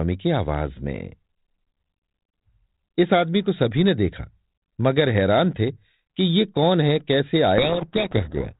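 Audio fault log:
7.58–8.6 s, codec payload misread: For the final second the speech drowns in harsh, gritty distortion, a rough crackling layer that swamps the speech rather than sitting quietly under it, as the earlier telephone-band G.726 sound did. The decoder is taking each G.726 code word with its bits in reversed order, so most samples' difference steps are wrong. The predicted waveform wanders badly from the real one, and the error holds until the clip ends.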